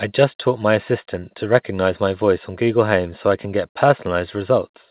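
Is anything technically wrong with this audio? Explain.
No, nothing is technically wrong: the speech comes through standard mu-law telephone coding, which limits the audio to a 4 kHz bandwidth and leaves a faint level-following noise about 38 dB below the signal, exactly as that format is meant to behave.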